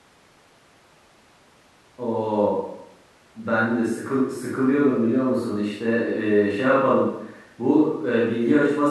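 A speech recording with no technical fault audible anywhere in it. There is nothing here that needs a time stamp or a cause.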